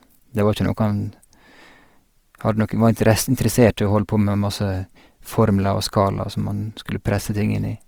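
From start to finish the speech has a rough, grainy texture, with voiced sounds carrying a plainly audible rasp. The top end still reaches about 20.3 kHz, so the sound is not muffled. The likely cause is Opus compression in its music mode at a low rate, around 24 kbps, where thin bands get filled with noise or folded copies of lower ones.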